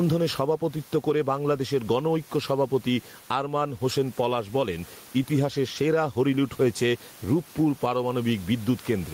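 Throughout the speech, the gain pumps, a gain swing of around 10 dB that leaves the level squashed. This gain pumping likely comes from gain set far too high, with a fast limiter clamping it down, and room noise sits about 33 dB below the speech.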